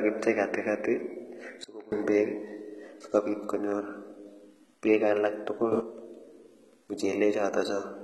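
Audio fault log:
throughout: HE-AAC compression. Heavy codec damage runs across the whole clip, likely from HE-AAC at a low bitrate around 16 kbps. Only the lower spectrum is truly coded. The treble is rebuilt from copied lower bands. Its harmonics don't line up, so sibilants sound gritty and metallic.
1.64–1.92 s: sudden gain jump. The level drops by about 23 dB at once, then returns. There is no ramp, so speech and background noise fall together, and each edge can click. This likely comes from a gain setting applied between two samples.
5.72–5.80 s: sudden gain jump. Right after "peek alak tugul", the level leaps up by about 12 dB for a brief moment. Speech and noise rise together with no fade. The likely cause is the same unramped digital gain step.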